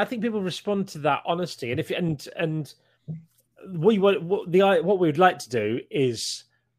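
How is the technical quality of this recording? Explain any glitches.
Nothing here needs explaining: the recording runs without any glitches at all.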